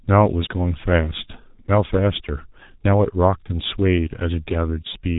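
Throughout, the speech carries heavy G.723.1 codec damage: a spectrogram shows nothing above 3.8 kHz, and the sound is muffled and hoarse with smeared consonants, pointing to roughly 6 kbit/s.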